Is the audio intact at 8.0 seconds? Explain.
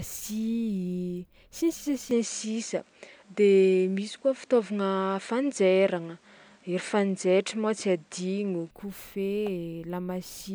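No. The input likely switched to a poorer device from 2.11 to 8.71 s, so the speech loses everything above 10 kHz, shifts level by about 5 dB, and gains faint new background noise.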